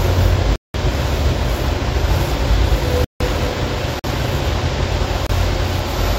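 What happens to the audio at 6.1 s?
Nothing goes wrong at 6.1 s; the sound carries on intact through that moment, with no dropout, click or other fault.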